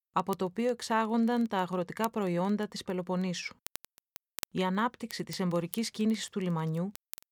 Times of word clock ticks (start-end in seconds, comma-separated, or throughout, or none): 0.11-7.32